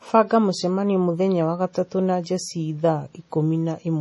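The speech carries heavy compression damage throughout, likely from MP3 compression. Nothing remains above 11.4 kHz, so the treble is cut off sharply. Weak frequency lines flicker on and off between frames. That gives a watery, swirly texture. The damage fits a bitrate near 32 kbps.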